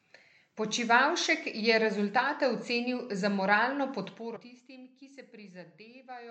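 A short stretch of compressed frames was skipped in this speech recording: at about 4.35 s the decoder never played a run of frames, so the audio jumps ahead by roughly a tenth of a second, consistent with about five frames of 21.3 ms each. A small slice of the speech simply goes missing at that point.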